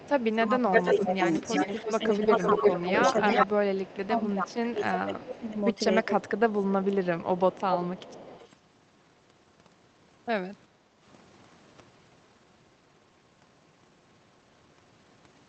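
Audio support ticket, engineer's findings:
Echo leak, 0.00–4.55 s: delayed copy of the speech about 331 ms behind, roughly as loud as the direct speech. Likely far-end loudspeaker pickup not cancelled by the echo canceller, leftover returned down the line.

Echo leak, 5.19–6.05 s: same 331 ms repeat, much weaker, roughly 20 dB under the speech. Likely residual loudspeaker pickup not fully removed by the canceller.

Echo leak, 6.71–8.53 s: repeat now about 380 ms behind, roughly 15 dB down. Likely loudspeaker pickup the canceller did not fully remove, sent back down the line.

Speech suppressed in double talk, 0.38–7.40 s: talker's level dips repeatedly, deepest drop around 15 dB, about 4 s affected in total. Likely canceller unable to separate near-end talker from loudspeaker echo during overlap, attenuating both.

Background gated by the echo canceller, 10.72–11.01 s: room noise dips about 8 dB for roughly 0.3 s, then recovers. 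Canceller clamping the microphone hard while the loudspeaker played, releasing afterwards.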